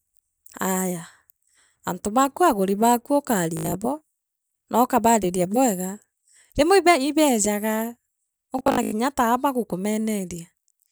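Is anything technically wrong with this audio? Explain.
Yes. The speech has two bursts of Bluetooth stutter. The first runs from 3.57 to 3.72 s, just after "antu baaku aaguri baaku", and the second from 8.59 to 8.93 s. In each, audio packets arrived late or not at all, so the receiver kept replaying its last short buffer until fresh data came in. Each repeated slice is a few tens of milliseconds long, and a run of them makes a buzzing, machine-gun stutter. About 112 ms of sound is lost over the first 0.15 s, with the longest unbroken stretch about 75 ms. About 224 ms is lost over the second 0.34 s, where the longest stretch is about 93 ms. When playback resumes it has skipped ahead rather than picking up where it stopped. On a waveform, each burst shows a short identical segment tiled end to end. On a spectrogram, the same block repeats as evenly spaced vertical bands, and the speech contour jumps forward where the burst ends.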